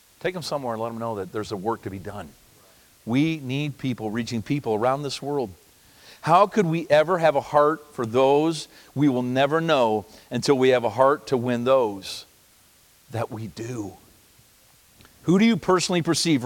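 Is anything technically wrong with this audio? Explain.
No, nothing in this speech recording points to a technical fault.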